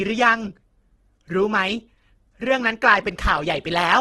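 From start to finish the speech sounds rough and grainy, with a noisy texture and nothing above 12.4 kHz. This is likely heavy Opus compression in its music mode, whose band filling under a tight budget, fitting roughly 12 kbps, turns detail into noise.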